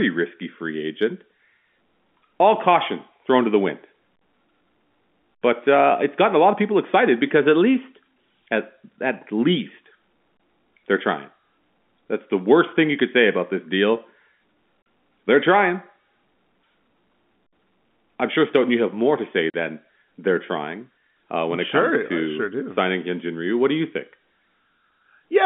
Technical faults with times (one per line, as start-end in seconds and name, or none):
14.82-14.86 packet loss filled with silence
19.50-19.54 packet loss filled with silence